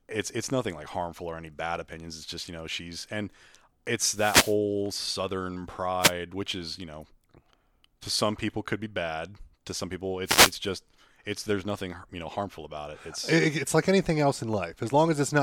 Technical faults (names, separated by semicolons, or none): wireless microphone noise hit